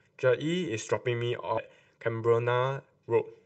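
Throughout the speech there is channel delay comb filtering: one channel trails the other by roughly 2 ms, and summing them cancels energy at evenly spaced frequencies starting near 300 Hz. The voice sounds hollow and phasey. A spectrogram shows fixed horizontal notch bands through the whole clip.

From 1.57 to 1.59 s the audio skips ahead. Around 0.4 s of speech is dropped and the two sides are spliced with no fill, so playback lurches forward abruptly. The waveform shows a hard join with an envelope discontinuity, and the spectrogram shows formant tracks breaking off mid-trajectory.

From 1.68 to 2.82 s a jitter buffer speed-up runs the speech at about 113% without changing pitch. The receiver trims short pitch-period chunks repeatedly, roughly 150 ms in total, so delivery sounds hurried. Harmonic spacing on the spectrogram stays put while syllables compress in time.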